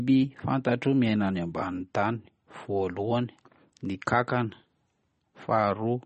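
Speech clip with plainly audible MP3 compression throughout: nothing survives above about 8.4 kHz, and the watery, swirly smear likely comes from a starved bitrate around 32 kbps.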